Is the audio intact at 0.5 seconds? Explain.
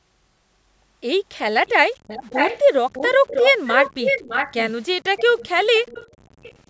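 Yes, the speech at 0.5 seconds is intact, with nothing interrupting or distorting it at that moment.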